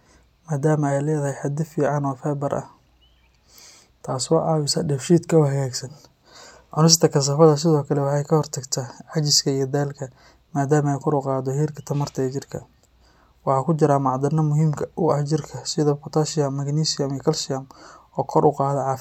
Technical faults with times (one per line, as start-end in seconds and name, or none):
none